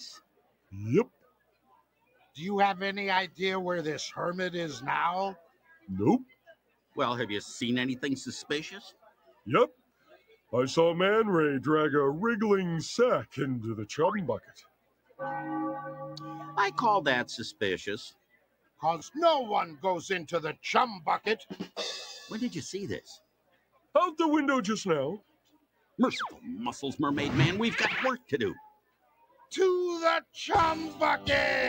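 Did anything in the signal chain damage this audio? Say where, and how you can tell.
Yes. The damage sits in call processing and in the wireless link to playback.

A noise suppressor built for speech was left running on this audio. It treats sustained tones, ambience and decay as noise, so the level swings by around 20 dB depending on what the processor classifies as wanted signal. Onsets come through while anything held or fading is pulled down, which makes the sound pump and thin out instead of keeping a stable balance.

The sound cut by the noise suppressor shows up as distinct dips at 0.17 to 3.39 s, 5.35 to 6.97 s, 8.87 to 10.53 s, 13.26 to 15.21 s, 17.52 to 18.83 s, 20.54 to 26.45 s and 28.19 to 30.36 s. In each, the deepest drop is about 20 to 21 dB. Sustained material sinks and decays are truncated early, while transients keep their level. That asymmetry is the suppressor's gain tracking, not a change at the source.

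Bluetooth stutter occurs at 7.58 to 7.61 s and 18.99 to 19.02 s. Each is a brief repeated slice, about 20 ms, heard as a tiny glitch before the sound resumes slightly further on, as if it had kept playing. That fits a single lost or late audio packet, with the receiver replaying its last buffer to fill the gap.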